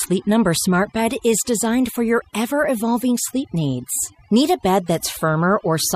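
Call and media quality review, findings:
Overdone noise removal, throughout. Noise suppressor set too aggressive, gating bands near its noise estimate; background drops and breaks up into twinkling specks.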